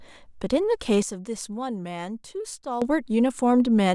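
At 1.02 s the speech drops abruptly by about 12 dB, and the background noise falls with it in the same instant, so the whole signal sits noticeably quieter until 2.82 s, where it snaps back to the original level. This is a sudden gain jump: the level change happens between adjacent samples with no fade. The likely cause is a digital gain setting or bit shift applied without a ramp.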